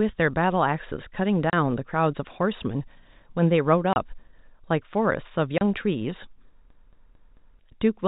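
Packet loss filled with silence strikes at 1.50, 3.93 and 5.58 s. Each time about 30 ms of speech vanishes, a single lost packet's worth, replaced by digital silence. The edges are abrupt, and a waveform shows flat-line gaps while a spectrogram shows clean vertical blank stripes.

From 6.70 to 7.59 s the sound is a CD stuck on one turn: a 222 ms slice repeats four times, each jump marked by a brief mute. It is a rapid, even stutter, and it shows as identical repeating blocks on the waveform and a periodic spectrogram pattern. The telephone-band G.711 path keeps everything under 4 kHz.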